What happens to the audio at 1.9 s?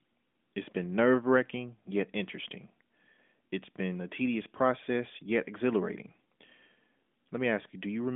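Nothing goes wrong at 1.9 s: the audio runs on intact through that moment, with only the steady narrowband character of the AMR narrowband mobile codec it was carried through.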